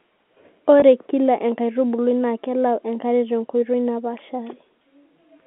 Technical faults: packet loss with pitch repetition

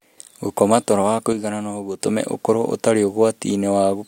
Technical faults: one channel drops out

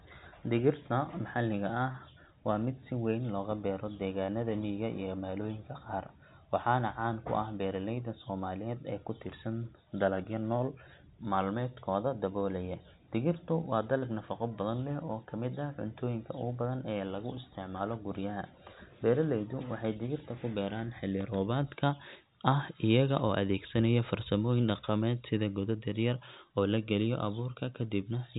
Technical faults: short concealed packet loss

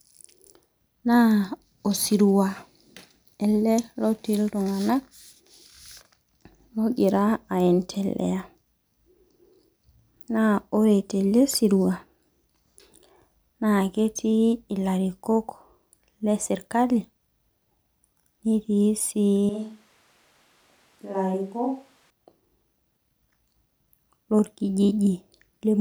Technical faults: switch to a distant microphone

